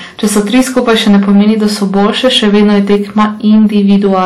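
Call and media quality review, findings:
Hard clipping, whole clip: a gain stage or converter is driven about 7 dB past full scale, so roughly a tenth of samples are cut flat. Speech peaks turn into crackle and harsh fuzz from the added high harmonics.

WMA compression, likely cause, whole clip: a long-block transform codec at a low rate, consistent with about 48 kbps. Plainly audible washy ringing and breathing hiss, weak detail dropped, nothing above 17.8 kHz.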